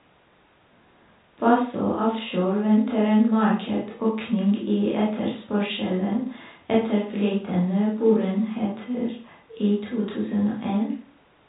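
No faults are audible in the speech; it carries the narrow band of G.711 telephone coding, with nothing above about 3.8 kHz.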